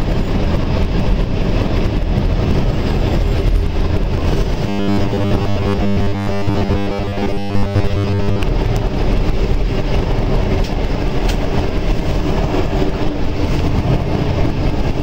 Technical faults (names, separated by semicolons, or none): robotic sound from repeated short buffers